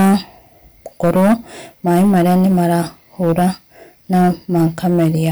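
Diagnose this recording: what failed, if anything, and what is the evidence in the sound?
A gain stage drove the speech about 11 dB past what the converter or sample format could hold, so hard clipping squares off the peaks throughout. Roughly one sample in fourteen is flattened, and those flat tops spray high harmonics, giving a harsh fuzz on every loud syllable.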